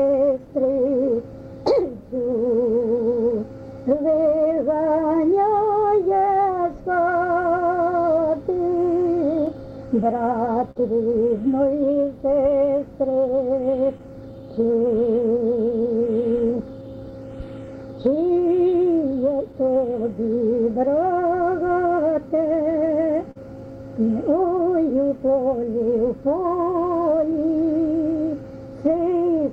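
Throughout the audio there is clock drift between sender and receiver: the sending clock runs about 4 percent slow relative to the playback clock, so the receiver's jitter buffer keeps draining and must be refilled. Because the mismatch persists for the whole clip, its timing never settles into a steady state. The result is a slightly unsteady, dragging pace rather than any single obvious break.

The receiver answers the drift with repeated timing corrections from 0.20 s to 29.19 s, stretching the material to an effective speed of 97 percent by inserting repeated short pieces. All the edits push in the same direction, lengthening the audio by around a second in total, but they arrive at uneven intervals. Individually they are small and come across as faint hiccups or a wavering tempo.

Scattered short gaps also appear where packets arrived late or not at all, each patched by extending the preceding sound. 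About ten fall between 0.38 s and 7.46 s, the longest around 10 ms. Three fall between 9.46 s and 10.78 s, the longest near 50 ms. Five fall between 12.73 s and 16.03 s, the longest around 10 ms. About fifteen fall between 18.02 s and 28.87 s, the longest again near 50 ms. Each is heard as a brief tick or smear.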